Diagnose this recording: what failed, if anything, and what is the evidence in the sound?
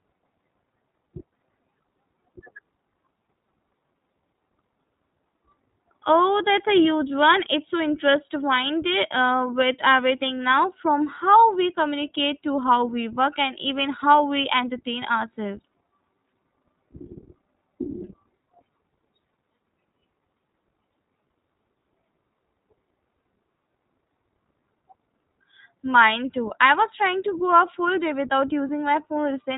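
Codec stage: iLBC codec throughout. The spectrogram is cut flat at 3.8 kHz, and the speech sounds rough and synthetic because the excitation of each 20 ms frame is coded at only 15.2 kbps.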